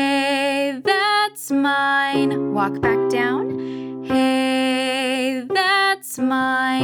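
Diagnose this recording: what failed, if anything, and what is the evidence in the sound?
Nothing failed; no fault is audible anywhere in this recording.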